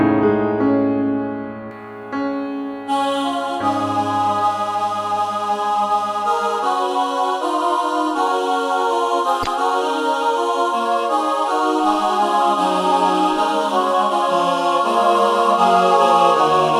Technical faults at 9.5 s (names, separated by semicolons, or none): pre-emphasis left on; damaged data in a compressed stream